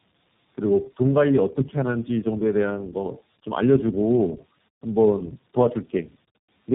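Throughout, the speech sounds rough, muffled and warbly, with nothing above 3.8 kHz. This is tandem speech coding: the call was decoded and re-encoded at each link, which fits three low-rate codecs in a row, such as AMR-NB twice and then iLBC. Each codec compounded the previous one's damage.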